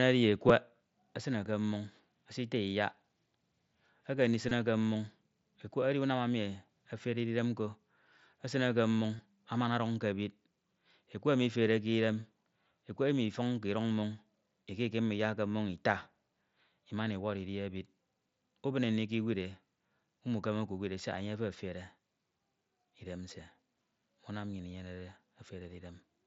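Concealed Bluetooth headset packet loss shows up three times: a tiny 7.5 ms blip at 0.49 s, then 22.5 ms gaps at 4.49–4.51 s and 9.17–9.19 s. The phone patched each gap by repeating recent waveform, and on the longer two you catch a brief buzzy hold and a slight warble as the real speech comes back.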